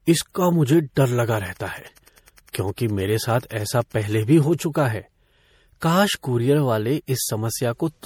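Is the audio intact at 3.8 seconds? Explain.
No. A steady faint ticking, about ten times a second and roughly 40 dB below the speech, runs from 1.28 to 4.63 s, starting just after "इसका मुझे डर". It is Wi-Fi interference: a nearby radio's 102.4 ms beacon is rectified in the audio circuit. Throughout, the speech also sounds swirly, smeared and hollow with blurred attacks, likely generation loss from repeated MP3 encoding, perhaps a few passes, consistent with about 64 kbit/s.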